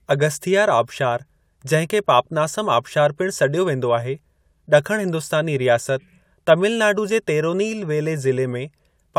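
Nothing stood out as a technical fault when listening to this speech recording.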